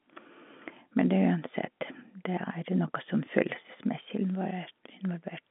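The speech comes over an ordinary telephone line with G.711 coding, confined to roughly 200 Hz to 3.5 kHz with nothing above about 3.8 kHz, and no technical fault can be heard anywhere in it.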